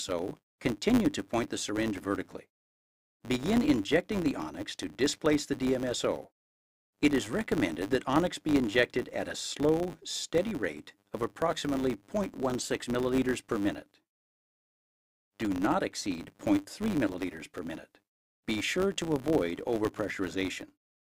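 A steady buzz at 100 Hz runs through the whole recording. It is a rapid train of tiny ticks that rises and falls with the level of the sound, getting stronger in loud passages and fading in quiet ones. This is a filter restarted on every block. The filter discards its memory at each block boundary and starts again from silence, so each block opens with a small transient. A repeat rate of 100 per second points to blocks about 10 ms long.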